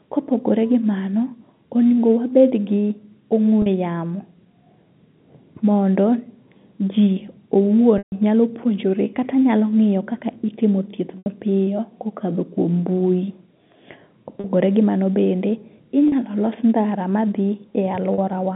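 A telephone-band speech recording with packet loss and pitch repetition: gaps at 3.62, 14.4, 16.08 and 18.14 s (40 ms each), 11.18 s (80 ms) and 7.98 s (140 ms) get bridged by a repeated, buzzy pitch period, with the longest one fading into silence before the speech returns. The durations fit lost 20 ms packets.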